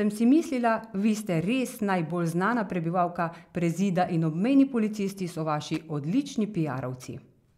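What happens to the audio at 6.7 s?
Nothing goes wrong at 6.7 s: the speech carries on through that moment with no audible fault.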